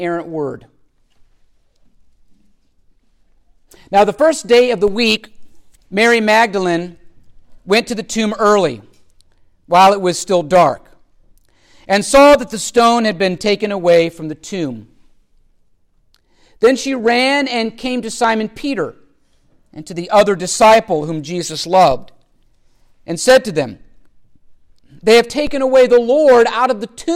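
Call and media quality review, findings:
DC step, 4.88 s, 21.91 s, 25.47 s: low thump as the waveform's zero line jumps by about -18, -18, then -15 dBFS. Likely converter recalibration or offset input switched in. A 2 Hz high-pass drains each offset over about 80 ms. Unlike a dropout click, the sound continues unbroken.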